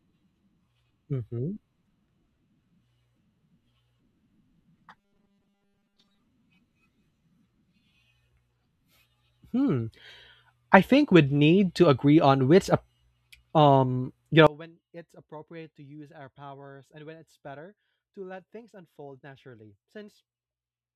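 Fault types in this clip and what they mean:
Robotic sound from repeated short buffers: From 4.96 to 6.20 s the speech turns into a rigid, metallic buzz at a fixed 200 Hz that still loosely tracks the words. The likely cause is audio arriving too late, with the playback side filling the gaps by looping the most recent fragment. A 200 Hz repeat rate fits a buffer of about 5 ms, and most of the audio in this stretch appears to be repeated rather than new.
One channel inverted: From 14.47 s to the end of the clip at 20.95 s, the level drops by about 25 dB when the stereo pair is heard in mono. The likely cause is one channel with reversed polarity. Anything common to both channels, including the centred speech, cancels in the sum, so only the difference between the left and right channels remains audible.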